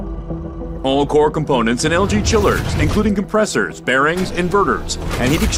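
No technical faults can be heard anywhere in this clip.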